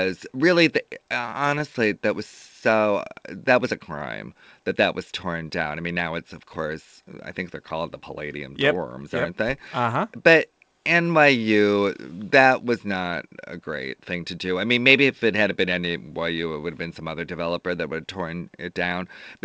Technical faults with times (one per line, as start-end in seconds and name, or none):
1.05-1.76 repeated stalls (stutter)
2.70-2.93 jitter buffer slow-down
18.69-19.37 jitter buffer speed-up